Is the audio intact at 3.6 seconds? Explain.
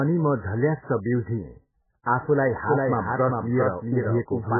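No, not at 3.6 seconds. Two things are going on there. First, the whole clip carries heavy damage that sounds like MP3 compression, likely from an encoder squeezed to a very low bitrate, something around 8 kbps. Nothing comes through above about 2.1 kHz, so the speech is dull and muffled. With so few bits, weak frequency components flicker in and out between frames, which gives a watery, swirly texture and blurs the onsets of sounds.

Second, 3.6 seconds falls inside a doubled audio track that starts abruptly at 2.65 s and runs to the end. A second full-band copy of the speech trails the original by roughly four tenths of a second at about 5 dB lower. It's probably a second capture path or a misaligned edit. It has no reverb tail or room colour, so it sounds like a flat, clean echo stacked on top rather than a real space.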